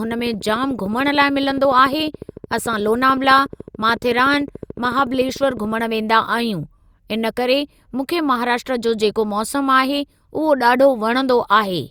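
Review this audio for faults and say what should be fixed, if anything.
Train of clicks, 0.05 to 5.80 s: a steady ticking at 13.8 clicks per second, around seventy in all, peaking roughly level with the speech and audible in the pauses too. The uniform, evenly spaced pulses point to likely electrical interference or a faulty connection or power supply. Reroute cables away from nearby equipment, check grounding, and confirm the interface is stable before recording.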